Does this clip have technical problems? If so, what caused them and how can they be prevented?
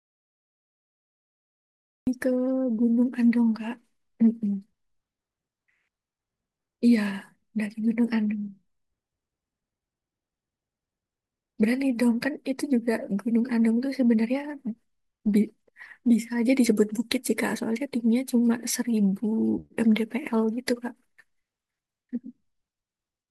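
Yes. The clip opens in an audio dropout to silence: from 0.0 to about 2.07 s there's nothing at all, not even room tone, and the speech then comes in mid-flow. Silence like that means the input was most likely cut off somewhere upstream, say a loose connection or a mute left on, while the recorder kept writing. Whatever was said in those first two seconds is gone. To prevent it, check connections and mute states and watch the input meter before you hit record.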